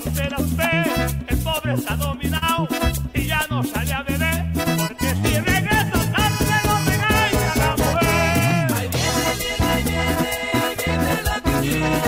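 From 2.37 to 2.44 s there is short concealed packet loss. About 40 ms of audio arrived too late, and the receiver's extrapolated fill leaves a brief smear.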